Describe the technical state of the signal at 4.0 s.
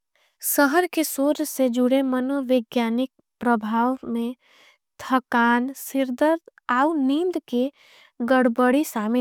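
Nothing at 4.0 s suggests a fault: the speech signal there is intact, with no dropout, distortion or other audible defect.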